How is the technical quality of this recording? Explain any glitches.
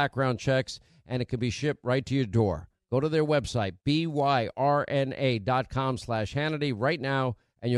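No technical faults can be heard anywhere in the recording, so there are no glitches to explain.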